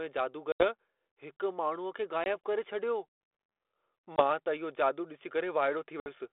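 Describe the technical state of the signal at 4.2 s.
Packet loss on an ADPCM call hits at 4.16 to 4.24 s: about one 20 ms packet is dropped and filled with silence, leaving the decoder's predictor and step size out of step with the sender's. The 32 kbit/s G.726 speech breaks off abruptly, then resumes with brief distortion before settling.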